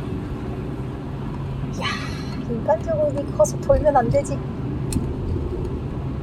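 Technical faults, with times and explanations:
No technical faults can be heard in these sounds.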